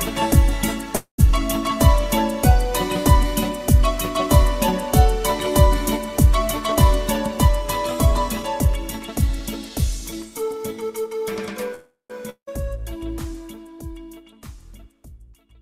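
At 0.95 s and again at 11.74 s there is a call audio freeze, likely from packets held up long enough to empty the jitter buffer. The last sound is stretched into a fading buzz, then silence (about 100 ms of it in the first, 150 ms in the second). The audio then resumes where it stopped, late by 228 ms and 352 ms. On a spectrogram each appears as smeared, repeating harmonics that dim into a blank gap.

From 7.38 s to 10.63 s a jitter buffer speed-up trims short pitch-period pieces repeatedly, removing roughly a fifth of a second. Playback runs at about 106% speed with unchanged pitch, so it sounds slightly hurried. The waveform looks compressed in time, with tiny splice points along it.

At 12.30 s a long network dropout, likely lost packets, leaves a 173 ms fading buzz ending in 90 ms of silence. The audio returns at 12.49 s with 180 ms missing. On the spectrogram this shows as a blank band with an abrupt jump where the sound resumes.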